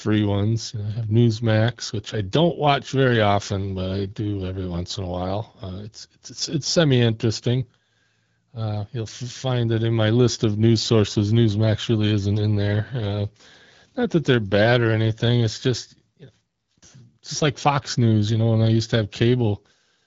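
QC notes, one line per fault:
No faults are heard in this speech clip. The AMR wideband (HD Voice) codec path can be heard in the top end stopping at 7.5 kHz and a light coding texture, which fits a 12.65 kbit/s rate.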